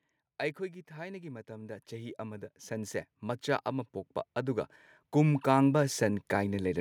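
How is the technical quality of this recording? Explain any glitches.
The recording has one real problem: automatic gain rising. From 0.94 s right through to 6.76 s the level keeps climbing, about 18 dB in all, because the gain control decided the input was too quiet and kept pushing it up. Voice and background noise swell together, so the room gets louder along with the speech.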